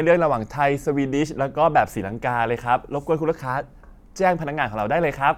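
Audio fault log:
No technical faults can be heard in this speech recording; the signal stays steady and intact throughout.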